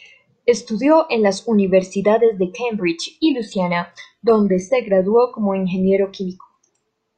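Adaptive stream at a lower bitrate, 3.21 to 5.21 s, just before "como ingeniero": a sudden, gapless switch consistent with 20 kbit/s HE-AAC cuts the treble, with nothing above 12.2 kHz.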